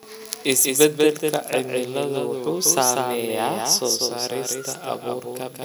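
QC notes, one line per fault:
Throughout: doubled audio track, a full-band copy trailing about 200 ms, about 5 dB down, dry and undecayed unlike echo; likely a second capture path.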